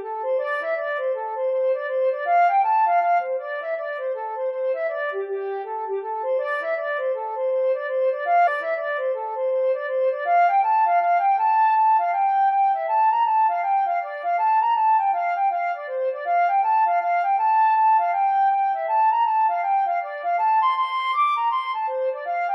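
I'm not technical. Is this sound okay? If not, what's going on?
No. A stream segment is repeated from 8.46 to 10.46 s. The player fetched the same chunk of audio twice, so about 2 seconds of sound play again, with a small blip at the jump back, and the clip runs 2 seconds longer.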